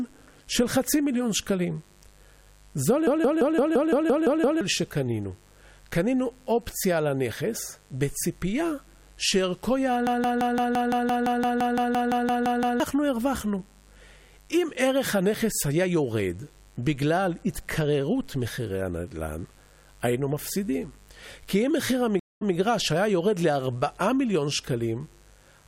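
Mains buzz runs under the whole speech recording: a raspy 50 Hz buzz with harmonics reaching into the kilohertz range, roughly 35 dB below the speech, from switching spikes leaking in twice per mains cycle. A system hang loop at 3.07 to 4.61 s and again at 10.07 to 12.80 s repeats one 171 ms fragment at 5.86 Hz as a machine-gun stutter. The hardware kept replaying a ring buffer while the system froze, which fits an 8192-sample buffer, and roughly 1.5 s and 3 s of audio are lost. A stream reconnect at 22.20 to 22.54 s leaves 216 ms of silence, and the sound then resumes 128 ms earlier as a fresh decoder restarts from resent data.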